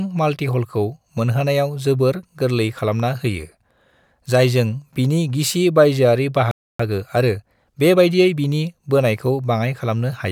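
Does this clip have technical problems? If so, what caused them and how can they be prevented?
Yes. A playback stall silences the speech from 6.51 to 6.80 s, a gap of about 280 ms. The player was likely starved of data or had its thread blocked. A deeper jitter buffer and a higher-priority audio thread would prevent it.

Time-compressed catch-up follows from 6.80 to 8.66 s, with the speech running about 1.15 times faster as the player trims its backlog by cross-fading out small slices. The pitch stays normal, which distinguishes it from a resampling speed-up that would raise the pitch. Avoiding the preceding stall removes the need for catch-up.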